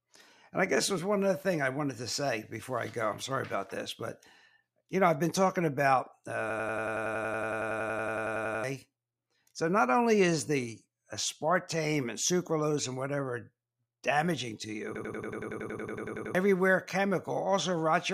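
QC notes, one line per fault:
6.50–8.64 s and 14.95–16.35 s, system hang loop: each time the system froze and the same 92.9 ms scrap of speech repeated about 10.8 times a second, which fits a 4096-sample buffer. That gives a machine-gun stutter and drops roughly two and one and a half seconds of audio.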